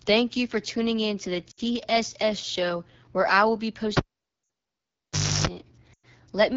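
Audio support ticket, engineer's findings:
AMR wideband (HD Voice) codec, throughout. Encoder running at a low mode, sound fits one of the two lowest AMR-WB rates, around 8.85 kbit/s. Pulse-model coding of the band up to 6.4 kHz breaks down at this rate. Speech plainly rough and raspy; top band is only shaped noise.

Lost AMR speech frames at 1.51–1.60 s (after "tuning in to the"), 4.43–4.49 s and 5.93–6.06 s. Radio errors failed frame checksums; decoder reused last good pitch and vocal tract settings with decaying gain. Gaps of 60, 60 and 100 ms. Quick drop to near silence within two frames, weak rough onset after.

Cable pulled and plugged in, 3.97–5.47 s, after "where I will be". Live connector pulled and reinserted. Pop, then roughly 1.45 s near silence, about 0.32 s of 50 Hz mains buzz from tip-only contact, second pop on reconnect. Dropout at 4.43 s falls inside this window.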